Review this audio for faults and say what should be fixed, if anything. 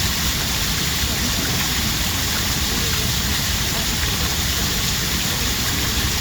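At 4.08 s there is a brief stutter, a click where a sliver of sound plays twice in a row. This is overlapping chunks: the audio was handled in pieces about 2.5 s long, and the next piece began before the previous one finished, so roughly 48 ms at the join was repeated. To prevent it, make sure consecutive chunks are aligned end to start, or crossfade and trim any overlap before joining them.

At 4.29 s and again at 5.87 s the sound briefly lurches forward. These are compressed frames skipped: in each case about two frames of the encoded audio were never played, either because they were missing from the stream or because the decoder rejected them as damaged, so roughly 50 ms of sound vanishes. To prevent it, re-encode or re-transfer from a clean source and use error-checked storage or transmission so that no frames are lost.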